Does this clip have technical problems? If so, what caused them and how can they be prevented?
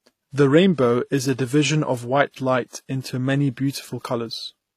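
Yes. The speech carries transcoding between lossy codecs throughout: the artefacts of the different codecs heard together, and nothing above 14.9 kHz. The sound points to a likely chain of WMA at around 64 kbit/s followed by HE-AAC near 24 kbit/s, with the second encoder wasting bits re-coding the first one's artefacts and then adding its own. On a spectrogram the top stops at a flat line at 14.9 kHz, with blotchy, patchy texture beneath it. To prevent this, encode only once, directly from the original uncompressed source.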